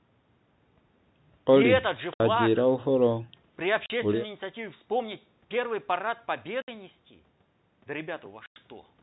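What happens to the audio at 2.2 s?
At 2.14 to 2.2 s, a run of packets never reached the receiver, and with nothing to conceal the gap it played silence instead. This is packet loss filled with silence. The speech stops dead for about 60 ms, which fits three consecutive 20 ms packets going missing, and then resumes just as abruptly. Because the waveform is cut off and restarted with no fade, the hole has hard edges.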